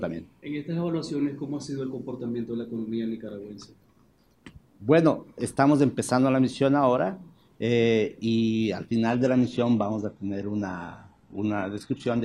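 An adaptive stream dropped to a lower bitrate at 9.11 s and stayed there until the audio ends at 12.25 s. The sound abruptly turns thinner in the treble, with nothing above 14.9 kHz and heavier codec artefacts, which fits a switch to a low-rate HE-AAC stream.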